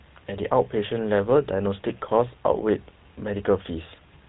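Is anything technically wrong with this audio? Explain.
Yes. Throughout, the speech carries GSM full-rate codec damage: pulse-driven vocal-tract modelling at a rate fitting 13 kbps leaves a buzzy, gravelly roughness and nothing above 4 kHz. Plain band-limiting would sound dull but smooth, without this buzz.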